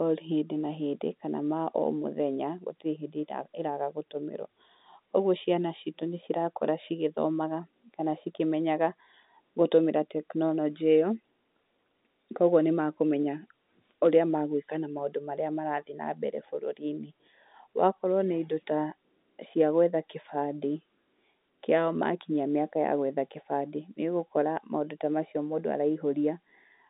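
No technical faults can be heard anywhere in the speech. The telephone path behaves as G.711 A-law coding at 64 kbps would, with the sound confined to a line band of roughly 200 Hz to 3.7 kHz and nothing present above 3.8 kHz.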